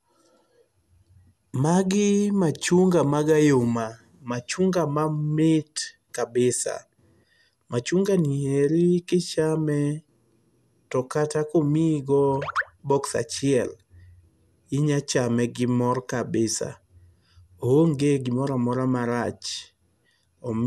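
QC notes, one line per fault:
Throughout, generation loss. The speech sounds swirly, smeared and hollow, with blurred consonant attacks and nothing above 12.6 kHz. This likely comes from repeated lossy re-encoding, around ten passes, with noise and spectral holes stacking up. The character fits MP2 at 128 kbit/s.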